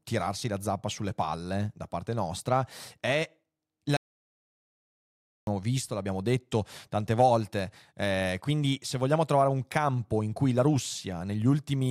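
A playback stall runs from 3.97 to 5.47 s, after "parte nostra è la": the speech cuts out for about 1.5 s, likely because the player ran short of data, before resuming at "visto l'abbiamo detto tante".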